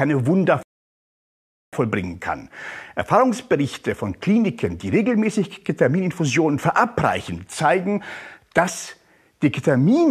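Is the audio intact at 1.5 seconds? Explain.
No, 1.5 s falls inside a rebuffering stall from 0.63 to 1.73 s: playback starved, adding 1.1 s of flat-line silence, a blank spectrogram gap, before resuming seamlessly.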